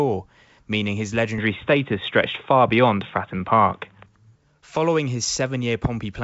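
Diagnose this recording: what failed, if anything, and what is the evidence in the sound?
After "meaning his", from 1.38 to 4.06 s, the top end cuts off near 3.8 kHz and the level shifts about 5 dB, with no gap. This points to a likely input switched to a poorer device at the driver stage, rather than a codec change, because the device's own tone and noise change.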